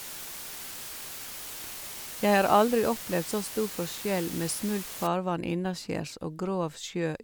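The speech has been stored at very low bit depth with dither, a word length that points to about 6 bits, from 0.0 to 5.07 s. Because random dither was added before each sample was rounded to so few levels, the rounding error becomes a steady white noise rather than distortion. The speech sits under a constant, even hiss roughly 10 dB below the signal, which stays clean of grit and crackle and lifts away after 5.07 s.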